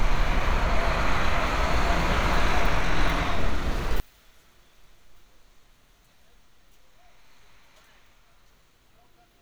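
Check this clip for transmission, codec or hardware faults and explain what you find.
One fault is present, running from 4.00 s to the end at 9.41 s.

One channel inverted, 4.00 s onward: the level drops by about 33 dB and the sound turns faint. This is likely a polarity flip on one stereo channel, so the content shared by both channels cancels when they are summed to mono, leaving only their small differences.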